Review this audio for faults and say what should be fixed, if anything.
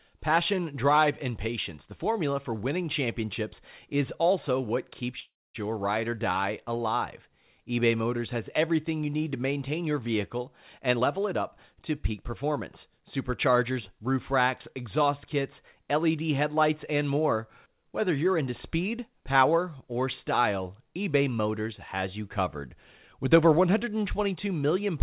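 A call audio freeze runs from 5.20 to 5.56 s, between "is also what keeps" and "your ride or die". The last sound trails off as a fading buzz or hiss, then about 0.25 s of flat silence. That shows as a smeared band decaying to a blank gap. Delayed packets likely ran the jitter buffer empty, and nothing is lost because the audio resumes where it stopped.

A jitter buffer speed-up follows from 10.79 to 14.08 s, after "to maintain your vehicle" and before "racks exhaust kits". Pitch-period snippets are repeatedly cut to drain the excess buffer, removing around 0.4 s. The sound plays about 10% faster at the same pitch, and the waveform looks compressed in time.

The narrowband call codec leaves nothing above 4 kHz. Keeping network delivery steady and giving the jitter buffer adequate headroom would prevent both the freeze and the catch-up acceleration.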